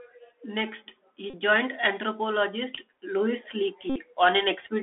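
Bluetooth CVSD headset codec, throughout: the speech is confined to roughly 300 Hz to 3.5 kHz, with scratchy sibilants and granular hiss from the one-bit delta coder, consistent with a 64 kbps link.

Bluetooth headset packet repeated, at 1.30 to 1.34 s, just before "joined anthropologist": lost packets were replaced by replaying the previous one, producing a 34 ms buzz near 267 Hz, which fits about nine missing packets.

The same fault returns at 3.90 to 3.96 s. This 60 ms run of repeated packets gives a longer buzz, which points to around sixteen lost packets.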